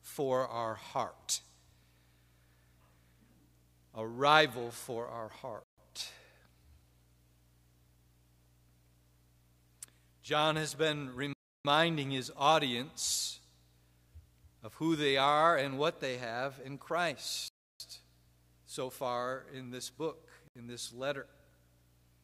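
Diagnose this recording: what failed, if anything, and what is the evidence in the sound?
Blank full-band spectrogram columns and flat waveform at 5.64–5.78, 11.33–11.65, 17.48–17.80 and 20.48–20.56 s: a likely Bluetooth stall, where the wireless link starved the headphone buffer until resent packets arrived.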